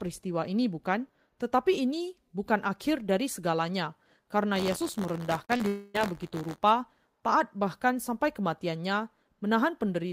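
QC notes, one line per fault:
4.55 to 6.61 s, buffer tearing: a rattling buzz near 86 Hz, fitting a 512-sample buffer, where a small slice of each period replays audio about 20 ms old.
5.45 and 5.57 s, short concealed packet loss: two brief smears, each covering about 40 ms of lost audio, filled by extending the last sound instead of leaving a gap.
5.68 to 5.96 s, long network dropout: the audio is held as a stretched, fading continuation for about 0.26 s with no silence reached, likely from lost packets, unlike the brief smears just before.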